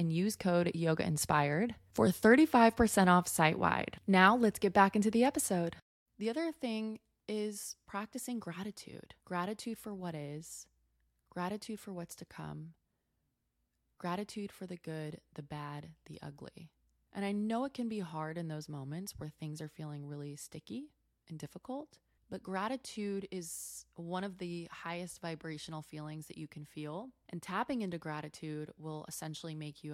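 No technical faults can be heard anywhere in it.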